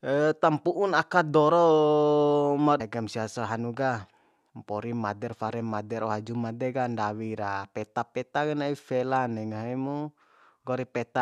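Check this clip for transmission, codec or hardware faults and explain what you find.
One fault turns up in this speech clip. At 2.79 s a stream segment was likely skipped: it failed to load and playback resumed from the next one, so the audio jumps ahead with a small blip.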